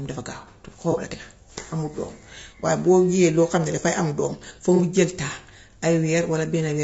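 From start to finish the speech sounds rough and grainy, with noise filling the gaps between harmonics and a thin, synthetic top end. This is most likely low-delay AAC compression: AAC-ELD's short frames resolve pitch poorly, and the damage fits a bitrate near 32 kbps.

At 0.92 s, 2.60 s and 4.76 s, each lasting roughly 40 to 50 ms, there is a brief smeared, noisy patch. This is AAC frame loss with concealment: about 30 ms of audio, consistent with a single lost frame, went missing and the decoder rebuilt it from the previous spectrum.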